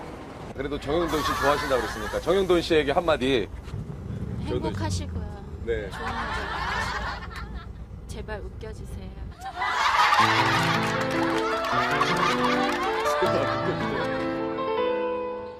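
Nothing here calls for comment, as the audio runs along without any technical problems turning up at any point.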